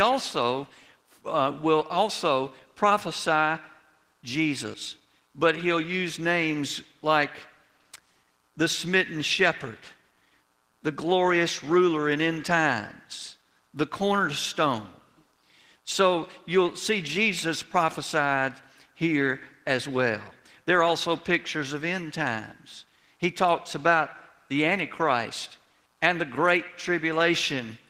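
Nothing is technically wrong with this clip.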